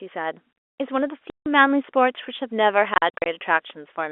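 At 1.30 s the speech drops out completely for 160 ms, until 1.46 s: packet loss filled with silence, where the receiver plays nothing in place of missing audio, giving hard edges. A waveform shows a flat gap and a spectrogram a clean vertical blank. From 2.94 s to 3.26 s the same fault returns as short holes scattered over 320 ms, none longer than 40 ms, which fits 20 ms packets and makes the sound stutter rather than stop. Throughout, the G.711 telephone coding confines the sound to roughly 300 Hz to 3.5 kHz.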